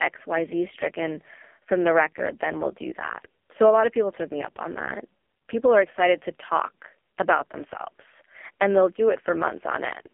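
The whole clip runs through an AMR narrowband mobile codec, and a heavily squeezed one. The line band sits around 250 Hz to 3.4 kHz with nothing above 3.5 kHz, and the buzzy, synthetic grain fits the low 5.15 kbps mode, where each frame's pulse model gets starved.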